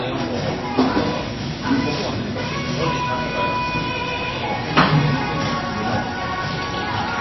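From start to finish the audio carries plainly audible MP3 compression damage, likely from an encoder starved of bits. Nothing is present above 5.8 kHz, so the top end is sheared off flat and the sound is dull. Below that cut, weak frequency components flicker in and out between frames, giving a watery, swirling texture, and sharp attacks smear. This degree of damage fits a very low bitrate of roughly 22 kbps.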